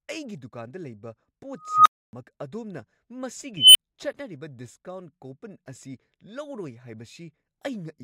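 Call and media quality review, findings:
Tone swelling to a loud squeal, then dropout: 1.58–2.13 s (around 1.5 kHz, 278 ms build, 275 ms silence); 3.57–3.76 s (around 3 kHz, 180 ms build, 10 ms silence). Unstable filter: recursive stage diverging, clipping, overflowing, muting until reset.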